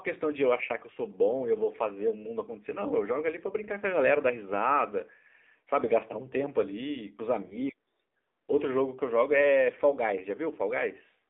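Throughout, the AMR narrowband mobile codec confines speech to roughly 250 Hz to 3.6 kHz, with a buzzy, synthetic texture fitting a low bitrate near 7.4 kbps. A spectrogram shows a hard ceiling with nothing above.

From 7.46 to 7.57 s, lost AMR speech frames, which fit two dropped 20 ms frames, make the decoder stretch the previous sound and fade it. This appears as a brief smeared, decaying patch in the waveform.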